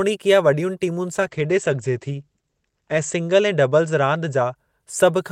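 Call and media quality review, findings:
Call bitrate drop, 1.12–4.61 s: speech turns rough and muffled, worst for 1.88 s. Spectrogram shows the upper band cut from 20 kHz to 8 kHz. The bandwidth estimator starved the encoder, which fits a fall from 32 to 12 kbps.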